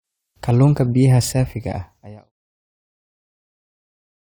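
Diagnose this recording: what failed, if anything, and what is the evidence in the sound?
Nothing failed in this speech recording: the only level change is a smooth fade-out that begins at around 1 s and completes by 2.32 s, shaped the way an editor would apply it with no click or hard edge, so no stage of the chain shows a fault.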